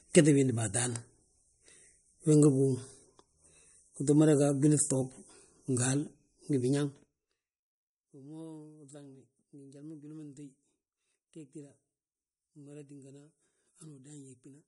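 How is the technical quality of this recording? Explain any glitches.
Not great, honestly. There's plainly audible codec damage the whole way through the speech. It's likely MP3 compression at a low bitrate, around 45 kbps: everything above 11.2 kHz is gone, and starved bands flicker, leaving a watery, swirly edge.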